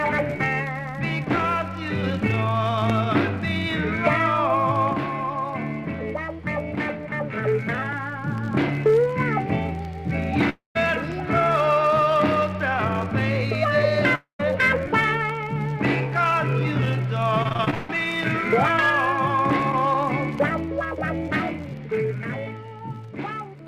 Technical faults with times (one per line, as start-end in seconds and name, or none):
10.49-10.77 long network dropout
14.15-14.41 long network dropout
17.43-17.91 repeated packet loss (robotic sound)